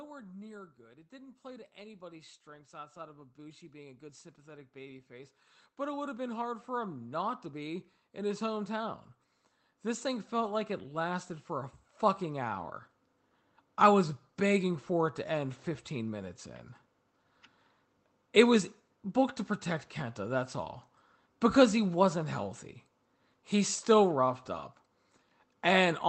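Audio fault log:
0.77–16.42 s, automatic gain rising: the gain control judged the speech too quiet and slowly raised it about 23 dB, so speech and background noise swell together. The waveform envelope widens steadily, and the spectrogram brightens evenly up to the call codec's 8 kHz ceiling.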